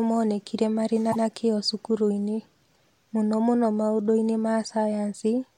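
It's a speech clip with one case of repeated frames: the stretch from about 1.11 to 1.24 s plays twice in a row, a roughly 130 ms block that fits about five compressed frames being sent again. You hear a quick stutter, and the clip runs about 0.13 s longer for it.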